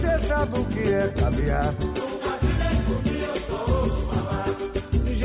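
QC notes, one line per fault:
No faults found on this pass.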